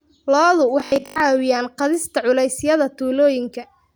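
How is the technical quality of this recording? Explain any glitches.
One glitch affects the recording. From 0.80 to 1.20 s, just before "caawiyaan qaadista", the speech turns into a rigid metallic buzz at 50 Hz. This is robotic sound from repeated short buffers, likely from late audio being covered by looping 20 ms chunks over most of that stretch.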